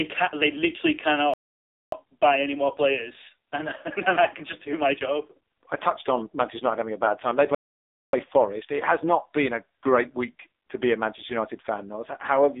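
The whole speech clip passes through the AMR narrowband mobile codec. Nothing reaches above 3.7 kHz, and the low end thins out below about 300 Hz. The voice sounds buzzy and synthetic. The codec rebuilds speech from a rough vocal-tract model and a handful of pulses per frame. Damage this heavy points to a low mode, around 5.9 kbps.

At 1.34 s, right after "can they literally", a playback stall cuts the sound to silence. It returns at 1.92 s with "buy any more players". The gap lasts about 0.59 s. A second stall of the same length runs from 7.55 s to 8.13 s. In both cases the player likely ran short of data and then resumed where it stopped.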